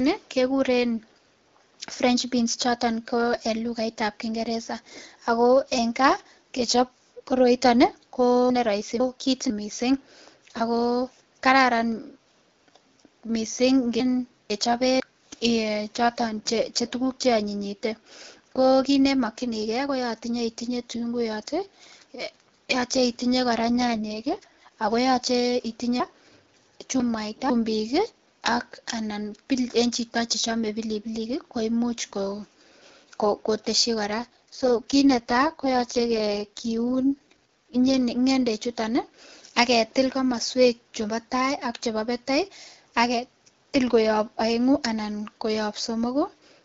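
Speech carried over an AMR wideband (HD Voice) link, with clarity consistent with the codec running at 12.65 kbit/s, has two kinds of fault. Chunks out of order occur at 8.5–9.5 s, just after "kaa kechop koroiton ko", at 14.0–15.0 s, and at 26.0–27.5 s. Each time, a block of sound plays after material that should come later, leaving three hard joins and a jumbled stretch. The segments sound about half a second long, and in the third case the block lands two segments late. An AMR rate drop occurs at 23.52–24.72 s, between "yoche itinyee" and "ako yoche", and again at 34.08–37.98 s. The bandwidth stays the same and there is no gap, but the speech turns rough and synthetic, which fits the network pushing the codec down from 12.65 to 6.6 kbit/s to spend bits on error protection over a weak radio link. Quality returns once the higher rate is restored.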